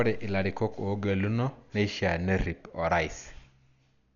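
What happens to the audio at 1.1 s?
At 1.1 s, as throughout the speech, there is heavy damage that is likely Dolby Digital compression at a low bitrate near 48 kbps. Nothing survives above 7 kHz, and lines left without mantissa bits are refilled with dither noise, so the sound is dull with a rough, fluttering haze.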